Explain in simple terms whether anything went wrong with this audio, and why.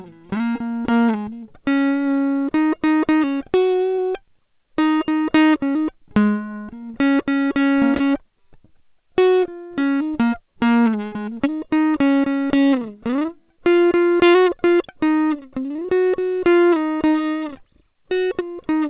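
Twice in this music, a small piece of the stream arrived too late to be played, and the receiver covered the hole. This is short concealed packet loss, at 3.95 to 4.01 s and again at 7.97 to 8.03 s. Each time about 30 ms was missing. The receiver extended the sound that came just before for roughly that long, then blended back into the real audio. You hear a quick smear or tiny wobble, and a brief sound in that spot can disappear.

At 11.06 s a longer stretch, about 60 ms, was lost in one go. This is a burst of packet loss. The receiver again carried on the last sound for about 62 ms, turning it down as the gap went on, so a tone becomes a short held buzz and noisier sound a fading hiss. The music then picks up again at 11.15 s, a little further along, with the piece in between gone. All of this passes through a telephone-style codec that keeps nothing above 4 kHz, which is why the music sounds narrow throughout.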